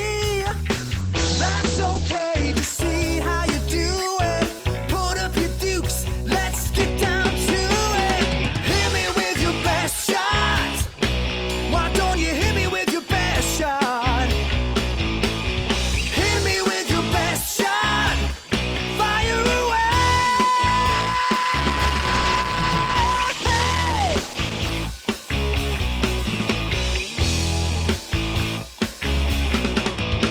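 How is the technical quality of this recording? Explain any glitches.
Quality dips twice from a call bitrate drop, at 0.71 to 3.83 s and 20.95 to 24.77 s. Each time the bandwidth estimate fell and the encoder coded more coarsely, so the sound turns rough and watery. It fits a drop from about 32 kbps to roughly 10 kbps the first time and 12 kbps the second. In the first dip the top end is also cut from about 20 kHz to 8 kHz, so it sounds muffled too.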